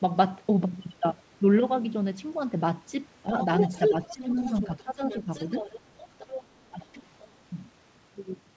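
From 3.4 to 6.44 s a second voice runs underneath the speech at roughly 10 dB below it. This is the other side's voice leaking through, most likely loudspeaker playback that the echo canceller failed to remove from the microphone. It adds a separate talker rather than changing the main one, and that sets it apart from the dips that follow.

Inside that stretch, at 3.9 to 4.38 s and 4.84 to 5.28 s, the main speech sinks by around 10 dB for a few hundred milliseconds in total. At 6.71 to 6.86 s it drops again, deeper, by about 15 dB. This is likely speech suppressed in double talk. The canceller cannot separate near speech from echo while both are present, so it turns the near talker down. These are intermittent holes in the main voice. They are not a steady loss of high end, which differs from the fixed band limit of the call path, where nothing above 8 kHz reaches the output.

Brief leakage returns at 6.93 to 6.98 s, very faint, and at 7.21 to 7.26 s, faint but clearer. 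Each lasts about 50 ms.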